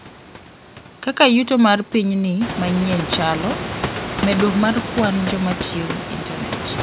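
The speech shows no technical faults; the room's background noise rises by about 17 dB at around two and a half seconds and then sits about 10 dB below the speech, and the band stops at 4 kHz, which fits a narrowband G.711 mu-law call path.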